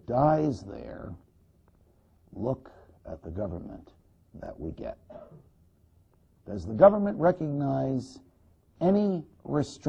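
At 4.46 to 4.48 s there is a single Bluetooth stutter. Roughly 23 ms of audio went missing, which fits one lost or late packet, and the receiver filled the gap by replaying the slice it had just played. The result is a brief doubled flutter, a tiny hiccup rather than a sustained buzz, after which the sound picks up further along. On a waveform the repeated chunk appears as a duplicated segment with a seam at each end. A spectrogram shows a short copied block bounded by thin vertical lines.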